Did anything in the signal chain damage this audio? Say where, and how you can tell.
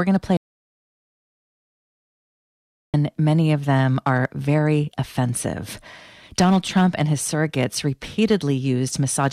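Yes: an audio dropout to silence from 0.37 to 2.94 s, likely a lost input link, leaves about 2.57 s of silence with no room tone, unlike a gate.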